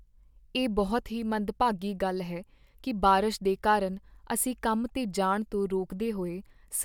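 No technical faults can be heard anywhere in this speech recording. At no point does anything in the audio mark itself as an error.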